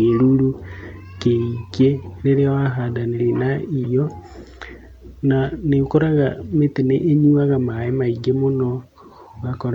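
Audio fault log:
3.83 s, compressed frames skipped: the speech jumps forward, losing about a tenth of a second of audio. The gap corresponds to roughly four whole frames of a frame length near 26.1 ms, pointing to blocks missing from the stream or rejected by the decoder as damaged. Because adjacent frames overlap and are blended on reconstruction, the join sounds like a short smeared blip rather than a sharp click.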